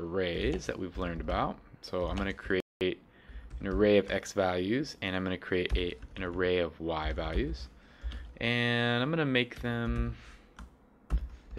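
From 2.60 to 2.81 s the sound drops to complete silence for about 0.21 s, then carries on. This is a Bluetooth stall, likely caused by interference delaying packets so the headphones' buffer emptied and playback halted until resent data arrived.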